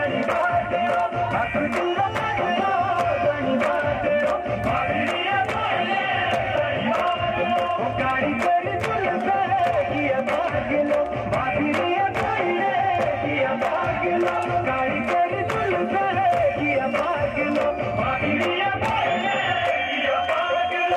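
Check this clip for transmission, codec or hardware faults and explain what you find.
No faults detected here.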